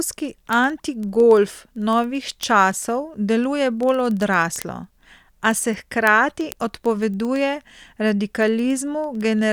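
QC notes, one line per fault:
0.14–9.49 s: word clock ticks, roughly twenty per second across the speech. The receiver runs unlocked from the sender's clock, off by roughly 400 ppm, so a single sample is dropped or repeated at each slip, producing a steady tick train.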